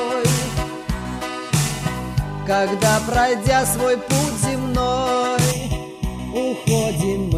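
From 5.52 s to the end of the clip, one channel falls behind the other by roughly a third of a millisecond, and the two are then summed to mono, causing channel delay (comb filtering). Because the shared content arrives twice with that small offset, it cancels at evenly spaced frequencies, the first notch sitting near 1.5 kHz. The result is a sudden hollow, phasey coloration, with the upper midrange thinned by fixed spectral notches.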